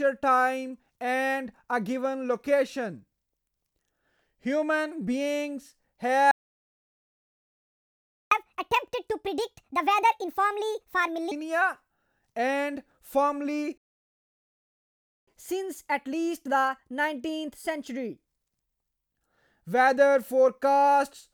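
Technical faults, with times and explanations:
6.31–8.32 s, playback stall: the speech cuts out mid-flow and the output stays silent for 2.0 s before resuming where it stopped. The player most likely ran out of buffered data or had its audio thread blocked, so it fed nothing to the output.
8.32–11.32 s, catch-up at higher speed: for 3 s the speech runs at 1.5 times normal rate and sounds clearly raised, roughly seven semitones higher. The player is resampling its backlog to recover the lost time, then drops back to normal speed.
13.77–15.28 s, playback stall: a second gap of about 1.5 s interrupts the speech mid-flow, with silence until playback picks up again from the same point. Starved input or a blocked playback thread is the likely cause.
15.28–18.28 s, catch-up at higher speed: for another 3 s the speech is a little hurried, at 1.15 times normal rate, and sits roughly two semitones sharp. 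The player is again resampling to absorb the delay, with a gentler speed-up than before.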